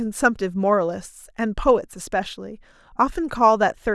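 No technical faults are audible anywhere in the speech recording.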